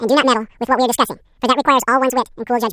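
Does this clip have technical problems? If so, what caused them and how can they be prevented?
Yes. Throughout the clip the speech is a wrong sample rate fault: it runs twice as fast and sits a full octave (12 semitones) higher. This fits 16 kHz audio played at 32 kHz without conversion. On a spectrogram, every harmonic and formant lies at double its normal frequency, and the waveform's syllable envelopes are squeezed to half their natural length. Tagging files with their true rate and resampling whenever the playback rate differs would prevent it.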